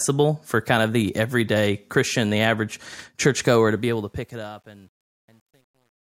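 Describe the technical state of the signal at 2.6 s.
At 2.6 s the speech signal is intact, with no fault audible at that moment.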